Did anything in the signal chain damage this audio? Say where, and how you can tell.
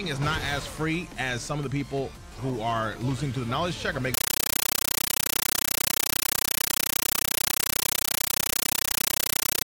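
Yes. A compressed stream played as audio takes over from 4.14 s to the end of the clip, at the playback stage on the digital link. The sound is replaced by very loud, chattering static: bursts of noise about 9.3 ms long, each followed by silence, repeating 31.25 times a second. That pattern fits an AC-3 (Dolby Digital) bitstream, likely around 448 kbps, being sent undecoded over S/PDIF or HDMI and treated as ordinary PCM samples, with each frame's padding heard as the gaps.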